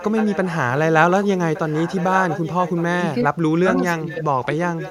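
Echo leak in this speech clip at 0.00–0.58, 1.23–1.28, 1.54–2.83, 4.12–4.16 and 4.79 s to the end: a copy of the talking returns about 1.16 s late, roughly 10–15 dB down, likely from a loudspeaker echo the far end's canceller missed. Speech suppressed in double talk at 3.24–3.68 and 4.03–4.61 s: the level drops by up to about 25 dB, likely because the canceller mistook overlapping talk for echo and attenuated it.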